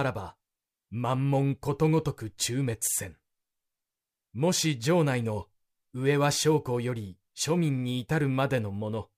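Speech, with no technical faults heard.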